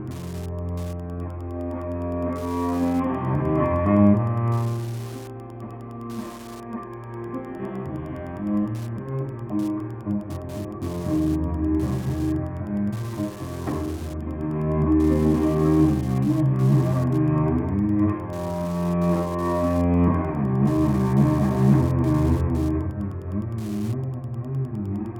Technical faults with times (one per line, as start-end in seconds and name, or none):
0.00-25.19 Wi-Fi interference